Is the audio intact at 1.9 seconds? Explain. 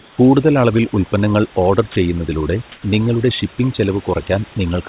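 No. From 1.92 to 1.96 s, 40 ms of the sound gives way to flat, steady noise before resuming, a sound dropped by the voice detector. The likely cause is the sender's detector mistaking a quiet stretch for background and pausing transmission, with the receiver filling the gap with comfort noise. Across this moment there is also overdone noise removal: bands near the noise estimate are pushed down hard, leaving a lowered background with twinkling specks.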